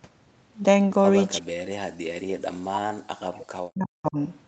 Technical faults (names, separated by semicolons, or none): speech suppressed in double talk